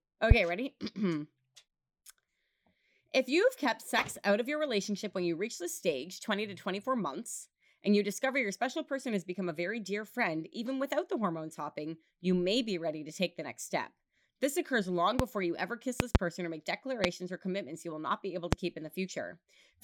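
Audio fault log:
0.31–0.34 s, 15.19–15.22 s, 16.00–16.18 s, 17.04–17.07 s and 18.53–18.55 s, loud pop: sharp thumps roughly 25 dB above the speech, a single pop each time except a double pop at 16.00 s between "you ever kiss" and "or make". A sudden voltage step, likely from a switch, plug contact or static discharge, is added to the signal. The speech runs on unbroken beneath each one, which separates these pops from dropout clicks, where the sound itself is cut.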